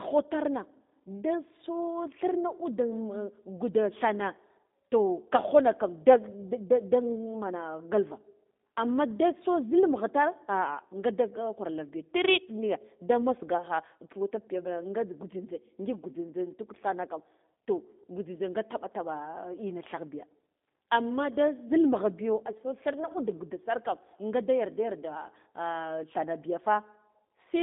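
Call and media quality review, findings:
G.729 codec, whole clip. Speech rough and slightly synthetic, plainly audible. Band limited to about 200 Hz to 3.7 kHz, nothing above. Mechanism: sparse-pulse CELP rebuild of the speech, consistent with an 8 kbit/s G.729A voice leg.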